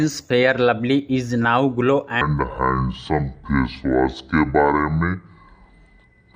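From 2.21 s to the end, the audio plays back at 0.581 times its proper speed, a section at the wrong speed dropping it about ten semitones and dragging it slow, likely from a wrong clock rate. Unlike a pitch shift, tempo and pitch fall together.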